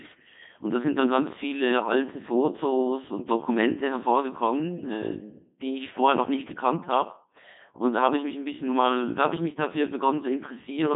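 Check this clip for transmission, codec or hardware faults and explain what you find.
The speech carries one fault, a Codec 2 vocoder, present from start to finish. Codec 2 discards the actual waveform and transmits only pitch, voicing, energy and a coarse spectral envelope; the decoder then rebuilds the voice from summed sine waves. The damage here is heavy, and the flat, buzzy, robotic quality fits a rate around 2.4 kbit/s. The sound sits in a narrow line band of roughly 150 Hz to 3.7 kHz, with nothing above 3.8 kHz.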